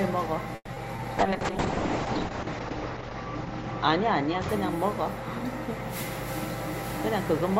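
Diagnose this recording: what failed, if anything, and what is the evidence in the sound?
Network stage: a call audio freeze from 0.55 to 0.70 s. The last sound smears into a fading buzz, about 30 ms of silence, then resumes 130 ms late. It's likely a jitter buffer starving.

Network again: short concealed packet loss at 0.74 and 0.96 s. Each is a 20 ms hole that the decoder papers over with a quick smeary extrapolation before blending back.

Codec stage: a call bitrate drop from 1.2 to 6.31 s. The top end collapses from 20 kHz to 8 kHz and the sound goes rough and watery, worst for about a second. That fits a fall from around 64 to 6 kbps.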